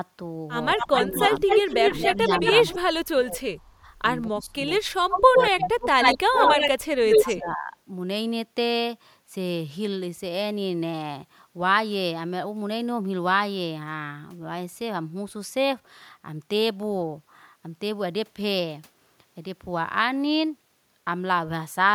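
From 0.75 to 1.42 s the speech dips by about 10 dB, for roughly a fifth of a second in total. This is speech suppressed in double talk, likely the echo canceller turning the talker down while the other side also spoke. Unlike a network dropout, the loss comes in pieces tied to overlapping talk.

Overlapping it, from 0.78 to 2.79 s, an echo leak brings back a copy of the voice 234 ms late, at about the same level as the speech. The likely cause is a loudspeaker echo that the far end's canceller failed to remove. It is a distinct delayed repeat, not the smooth tail of room reverb.

From 1.96 to 6.61 s the suppression returns harder. It cuts up to about 30 dB in pieces totalling around two seconds, likely again from the canceller muting during double talk.

A second echo leak runs from 5.1 to 7.37 s, likely from an uncancelled loudspeaker echo. It trails by only 85 ms and sits about 5 dB above the speech.

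From 7.2 to 7.76 s the speech drops by about 15 dB for roughly half a second, likely another double-talk suppression.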